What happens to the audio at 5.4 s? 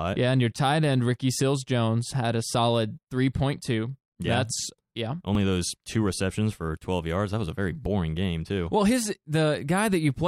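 At 5.35 s, just after "that's yeah" and before "those two receptions for", the program likely failed to collect a buffer before the hardware overwrote it. This is a dropped buffer (overrun): a few milliseconds of speech vanish and the two sides butt together, heard as a small jump.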